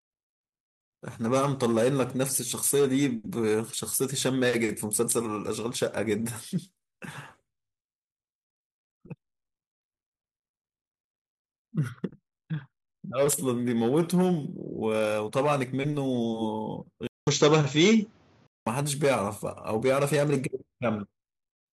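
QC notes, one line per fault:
17.07–18.67 s, input switched to a poorer device: the recording path likely jumped to a different, lower-grade microphone or a headset call profile. The switch leaves a gap of about 0.2 s, then the speech comes back band-limited with nothing above 7.5 kHz, so it sounds dull and boxy. The level also shifts by roughly 5 dB, and a faint new noise floor appears well below the speech. That floor belongs to the other device.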